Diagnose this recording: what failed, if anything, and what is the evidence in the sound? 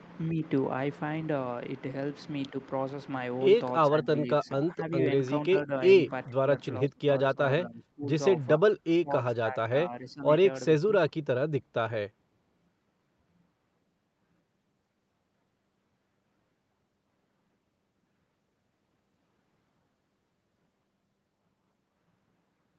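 Call processing: speech dips about 10 to 30 dB in fragments from 3.92, 4.43, 5.65, 6.09, 6.86, 8.59 and 10.81 s. This is likely speech suppressed in double talk, where the echo canceller mistook near-end speech for echo.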